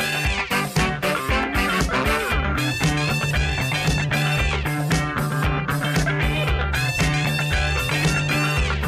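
At 0.35 s the sound jumps forward, with nothing missing you'd notice beyond a few milliseconds. The same thing happens again at 1.81 s, a bit bigger since around 15 ms vanish, and once more at 3.55 s with another tiny skip. These are likely dropped buffers (overrun): the capture side didn't grab its samples in time, so that slice got overwritten and the audio on either side was butted straight together, no gap.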